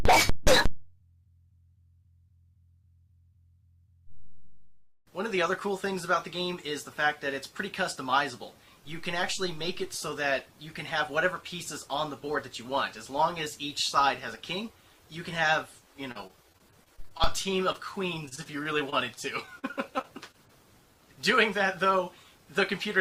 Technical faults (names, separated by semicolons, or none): repeated packet loss (robotic sound); short concealed packet loss; jitter buffer speed-up